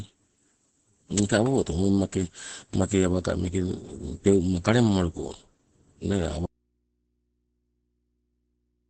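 From the start the whole clip sounds muffled and hoarse, with nothing above 8.6 kHz, which points to Opus compression, likely in its SILK speech mode at a low rate around 12 kbps. At that rate the encoder strips out detail and narrows the band, so the damage is heavy.

Then at 6.46 s there's an abrupt audio dropout to a faint residue that runs right to the end. The speech vanishes mid-flow, leaving only mains hum, far below the speech level, likely because the signal was lost while the path after the break stayed live.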